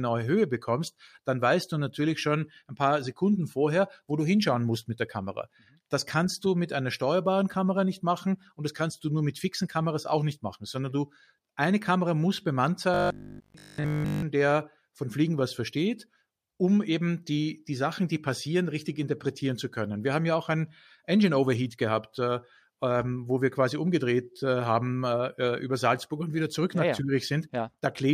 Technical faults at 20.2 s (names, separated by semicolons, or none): none